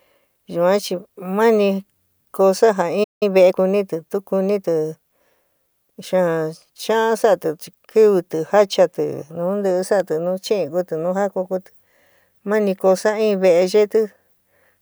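At 3.03 s the player most likely ran short of buffered data or had its output thread blocked, causing a playback stall. The speech cuts off mid-flow and the output goes silent for about 175 ms before resuming at 3.23 s.

From 3.23 s to 3.57 s the player works off its backlog with time-compressed catch-up, cutting small segments and cross-fading the joins. The speech runs at 1.5 times normal speed but keeps its normal pitch.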